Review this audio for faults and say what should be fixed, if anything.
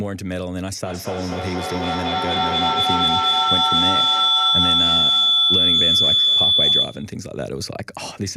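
A feedback howl runs from 0.84 to 7.25 s. Two devices in one room share the call, so the loop from microphone to loudspeaker gains level on every pass. The repeats build into a tone near 3 kHz, with the loop repeating roughly every fifth of a second, and the howl peaks about 9 dB above the speech. Keep only one device's microphone and loudspeaker live in the room, or use headphones, so the loop cannot form.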